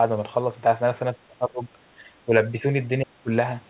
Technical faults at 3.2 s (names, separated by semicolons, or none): speech suppressed in double talk